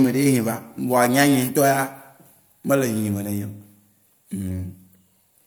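No technical faults occur anywhere in the recording, so there is nothing to describe in time order.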